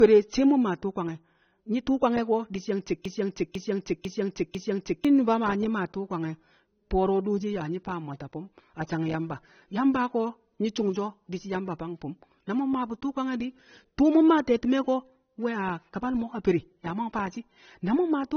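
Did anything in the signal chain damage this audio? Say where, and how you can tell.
Yes. At the codec stage, the whole clip has a hard ceiling: nothing sits above 6.3 kHz, seen on a spectrogram as a flat empty band. This is low-bitrate audio saved at a high bitrate, likely a low-bitrate AAC encode re-saved as MP3. The second encode cannot restore the missing top.

From 3.05 to 5.05 s there is a broken-record loop: one 0.5 s fragment repeats exactly, four times back to back, and the audio due there is lost. The waveform shows identical repeating blocks. The cause is likely a buffer or playback stall that kept resending the last fragment.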